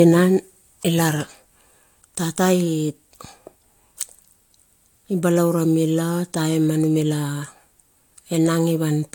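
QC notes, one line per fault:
Throughout: generation loss, swirly smeared speech, blurred attacks, nothing above 19.3 kHz; likely about three AAC-LC passes near 96 kbit/s, each requantising on shifted frames.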